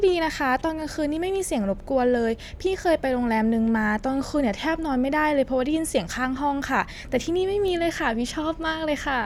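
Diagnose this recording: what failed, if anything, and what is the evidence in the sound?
Nothing failed; no fault is audible anywhere in it.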